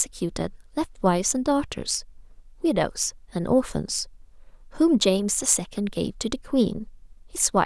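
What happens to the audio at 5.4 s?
Nothing goes wrong at 5.4 s; the speech carries on cleanly through that moment with no dropout, click or distortion.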